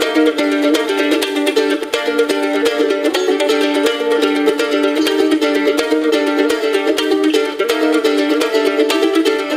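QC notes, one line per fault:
No faults heard anywhere in this clip.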